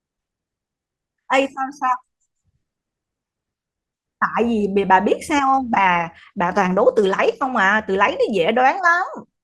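From 5.56 to 7.56 s the adaptive stream switches to a lower bitrate. Codec artefacts abruptly rise, which fits 16 kbit/s Opus, with no gap.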